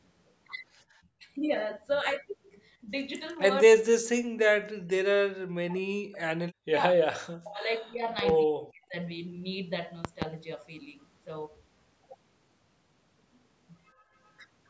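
A speech recording in which the talker's voice repeatedly sinks and breaks up: a brief dip of roughly 15 dB at 1.18 s, then much deeper cuts of around 40 dB from 3.64 to 6.24 s, at 6.58 to 6.74 s, 6.95 to 7.02 s, 7.37 to 8.04 s and 8.45 to 8.94 s. The long stretch near 4 to 6 s loses about two seconds of voice in pieces. This is speech suppressed in double talk, likely because the far side was talking at the same moment. The echo canceller could not tell the local voice from the loudspeaker echo and clamped down on both. Two loud pops also land on top of the speech, each a pair of sharp clicks peaking roughly 20 dB above the voice, one pair between 8.19 and 8.32 s and another between 10.05 and 10.25 s. The speech continues unbroken underneath them. They sound like a sudden voltage step or spike, likely from a plug, switch, static discharge or driver glitch, shaped by the circuitry that follows it. 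Near the end, from 13.95 to 14.11 s, the room background drops by about 14 dB for a moment and then comes back. That is background gated by the echo canceller: it pulled the microphone down hard while the loudspeaker was playing and released it shortly after. The absence of anything above 8 kHz comes from the normal call microphone processing.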